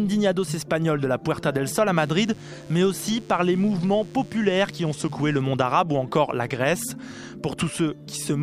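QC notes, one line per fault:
1.96–5.41 s, DECT cordless phone buzz: a nearby DECT handset or base station transmitting a radio burst every 10 ms is being rectified in the audio circuit, so a steady, thin 100 Hz buzz rich in harmonics sits about 30 dB below the signal for these 3.4 seconds.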